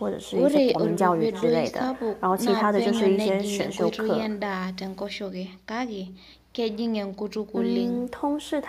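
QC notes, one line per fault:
Throughout: echo with no canceller. Speech returns roughly 300 ms later, about 21 dB quieter and thinner, because the far end's loudspeaker feeds its microphone and nothing removes it. A spectrogram shows faint delayed copies trailing each syllable, and the waveform shows small bursts after each phrase.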